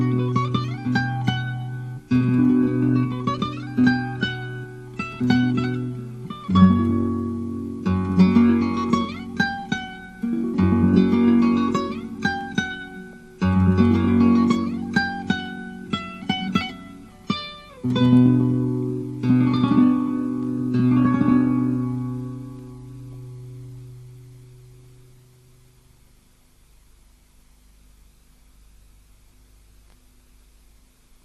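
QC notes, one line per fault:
throughout: MP2 compression. The whole clip is plainly band-limited and dull, with a granular, gurgling texture on the audio. The likely cause is MPEG Layer II coding at a rate that fits around 80 kbps. The coder splits the signal into 32 equal sub-bands and shares out a fixed bit budget among them. When bits run short, upper bands drop out or flicker on and off, and the bands that remain are quantised coarsely enough to produce that grain.
13.13 to 13.23 s: DAB burbling. For about 0.1 s the audio breaks into bubbling, watery blips. This points to reception errors, at a rate of roughly one bit in a thousand, getting past the error correction into the coded data. Corrupted samples put short bursts of noise into individual sub-bands, and corrupted scale factors make a band's level jump for the rest of its frame. Because each error is confined to one band, the result is burbling rather than a broadband click.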